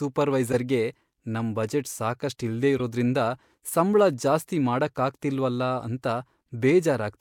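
Flipped bits in compressed frames were decoded anyway, so a corrupt frame decoded twice: at 0.52–0.56 s across a few frames, a chirpy burst peaking about -15 dBFS; and at 2.78–2.80 s, just after "ನಮ್ ಬಜೆಟ್ ಸಾಕಷ್ಟ್ ಇಲ್ದೇ", a shorter blip near -20 dBFS, energy misplaced in frequency.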